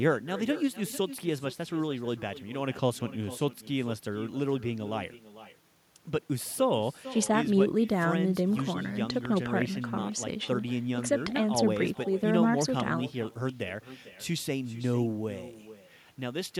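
From start to finish the speech carries echo with no canceller: the far end is playing the call over a loudspeaker, its microphone picks it up again, and nothing strips that copy out before it returns. Every phrase is trailed about half a second later by a quieter, thinner repeat sitting about 15 dB below the original. On a waveform each burst has a smaller ghost burst behind it; a spectrogram shows faint, thinner duplicates of every syllable shifted right.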